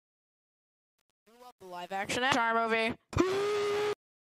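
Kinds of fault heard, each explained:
Truncation distortion on a fade: the fade-in is kept at too few bits without dither, which fits 8 bits, so the quiet start turns gritty until about 2.1 s.
Damaged data in a compressed stream: a corrupted bit of the coded stream throws the decoder off briefly, giving a short blip at about 2.32 s.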